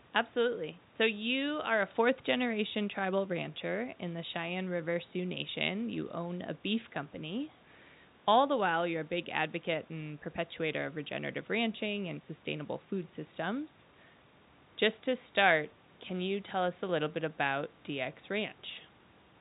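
This speech clip has nothing technically wrong with it.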